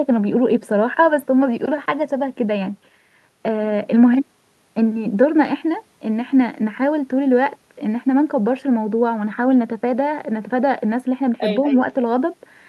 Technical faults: echo leak

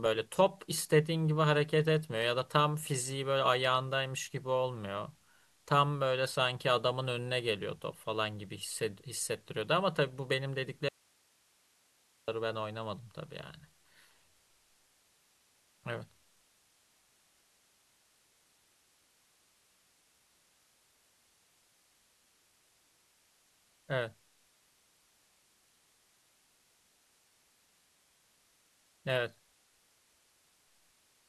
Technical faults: audio dropout to a faint residue

